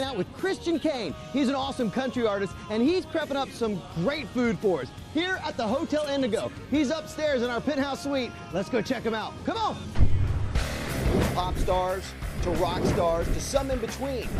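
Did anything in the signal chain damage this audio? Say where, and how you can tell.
No, nothing in the signal chain damaged this audio.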